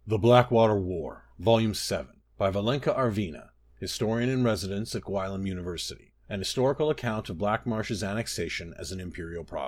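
Nothing technical trips up the recording here; it's just a stretch of speech with no audible faults to point to at any moment.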